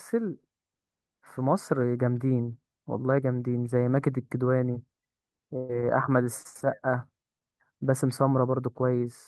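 At 4.71–4.75 s there is a short concealed packet loss. About 20 ms never arrived, and the decoder extended the preceding sound, leaving a brief smear. A burst of packet loss follows at 5.57–5.71 s. About 120 ms went missing, and the receiver's held, fading continuation replaced it without silence. Two more short concealed losses, each about 20 ms, smear the sound at 6.43–6.47 s and 7.39–7.43 s.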